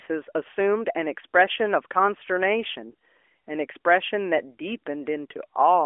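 No faults are present; the speech carries the expected narrowband mobile-codec sound, AMR-NB at what sounds like 12.2 kbps with only light codec colouring and a line band of 300 Hz to 3.4 kHz.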